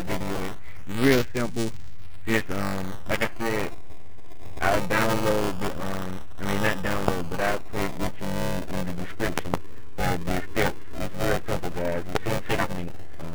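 Buffer tearing runs through the whole clip. A robotic buzz at 345 Hz sits on the sound, which fits a 128-sample buffer. Writer and reader have slipped. About a third of each buffer replays audio from about 10 ms earlier, joined hard.

Loud pops arrive at 7.08 to 7.10 s, at 9.38 to 9.56 s as two pops, and at 12.15 to 12.17 s. Each peaks about 20 dB above the sound, which continues underneath. A likely cause is a voltage pulse from a plug, switch, static or driver glitch.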